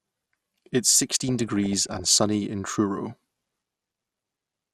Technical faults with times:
0.00-4.73 MP2 compression
1.24-2.23 DAB burbling
3.43-4.11 DAB burbling

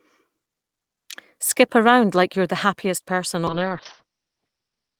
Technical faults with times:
3.48-4.99 call bitrate drop

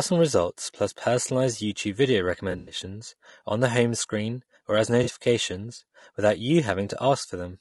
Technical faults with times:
0.00-7.61 low-delay AAC compression
2.51-2.75 AAC frame loss with concealment
5.03-5.10 AAC frame loss with concealment

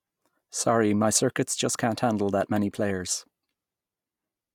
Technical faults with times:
none

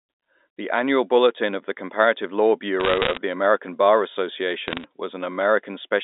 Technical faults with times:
2.80-3.18 bit errors on a digital phone line
4.68-4.84 bit errors on a digital phone line

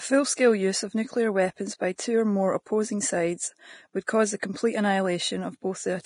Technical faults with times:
0.00-6.05 Vorbis compression
4.07 pre-echo

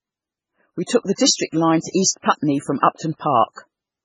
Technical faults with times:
0.00-4.05 MP3 compression

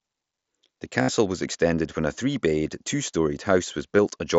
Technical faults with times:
1.02-1.09 concealed Bluetooth headset packet loss
3.97 concealed Bluetooth headset packet loss

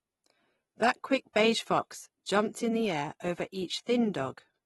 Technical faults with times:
0.00-4.65 AAC compression

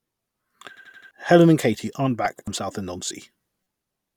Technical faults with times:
0.77-1.11 repeated buffer
2.39-2.47 repeated buffer

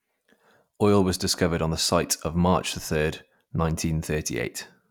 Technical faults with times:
none

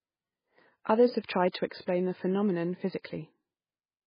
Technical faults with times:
0.00-4.07 MP3 compression

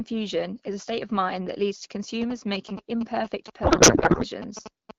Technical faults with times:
2.22-4.91 GSM signalling bursts
3.63-4.25 codec payload misread

